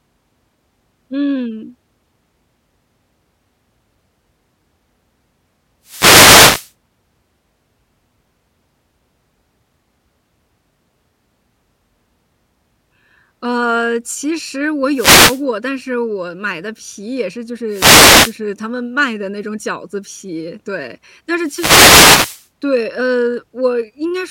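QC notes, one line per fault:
5.84–6.72 s, 14.91–15.44 s, 17.69–18.38 s, 21.40–22.48 s: wireless microphone noise hit. Four short bursts of static swish up over the speech, each lasting roughly half a second to a second. The analogue FM radio link is dropping into brief fades where reflected signals cancel the direct one, so the receiver's own noise floor surges, partly masking the speech until the signal recovers.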